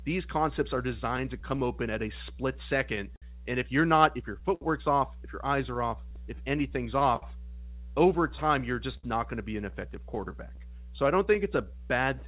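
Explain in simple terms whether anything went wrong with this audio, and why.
Mains hum runs through the whole speech clip as a steady low buzz at 60 Hz. The cause is electrical: a ground loop or a nearby transformer let the power line's own vibration leak into the audio wiring. Because the power supply never stops, the hum stays constant from start to finish instead of coming and going.

Clock drift between sender and receiver is present throughout. The sending device's audio clock ran roughly 5 percent slow compared with the receiving one. The receiver therefore kept getting sound a little more slowly than it played it out. Its small holding buffer kept running low, so it had to keep stretching the audio to avoid running dry. You hear the result as the next problem.

Repeated timing corrections run from 0.52 s to 12.18 s. To keep up with the slow sender, the receiver kept repeating tiny slices of sound. 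Altogether it added about a fifth of a second, so the speech plays at about 98 percent of its proper pace. Each patch is small and unevenly spaced, so it comes across as slight hiccups or a tempo that feels faintly unsteady rather than one obvious glitch.

Scattered short gaps appear between 0.57 s and 11.59 s. About twenty small pieces of the audio arrived late or went missing, spread here and there. The longest was roughly 70 ms, and together they add up to around 0.4 s. The receiver covered each hole by carrying the last sound forward briefly, so nothing drops out completely, but you can catch brief ticks or smeared moments. The call line itself carries nothing above 4 kHz, which gives the typical narrow phone sound.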